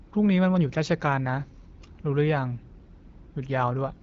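Speech carried over an AMR wideband (HD Voice) path, its band-limited, noise-filled top end fitting a mid-rate mode around 12.65 kbit/s, with no fault audible anywhere in the recording.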